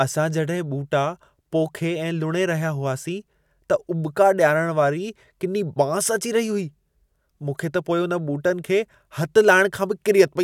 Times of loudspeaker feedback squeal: none

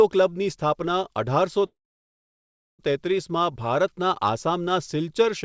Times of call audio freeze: 1.66-2.81

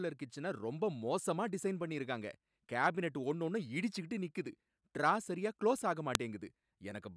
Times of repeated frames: none

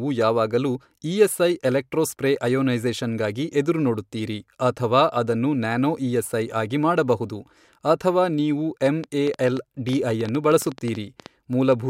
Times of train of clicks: 8.86-11.73

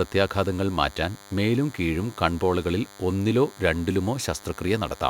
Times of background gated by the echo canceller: none

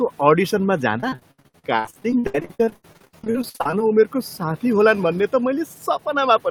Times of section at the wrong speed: none

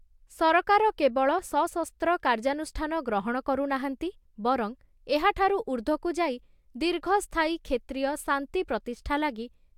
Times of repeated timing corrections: none

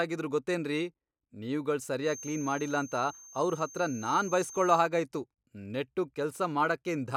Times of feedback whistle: 2.00-4.88

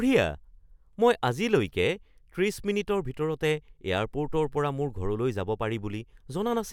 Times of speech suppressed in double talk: none

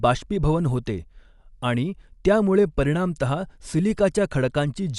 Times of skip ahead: none

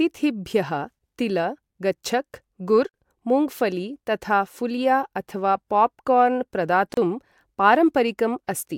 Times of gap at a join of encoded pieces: 6.94-6.97

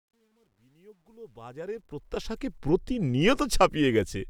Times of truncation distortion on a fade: 0.00-2.58

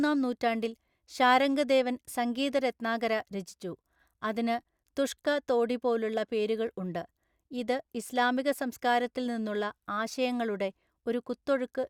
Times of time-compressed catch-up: none

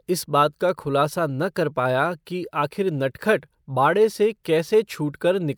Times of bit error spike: 0.69, 2.30

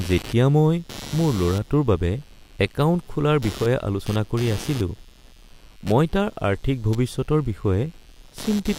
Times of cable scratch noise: none

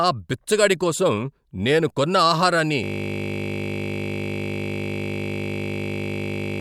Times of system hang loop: 2.84-6.60

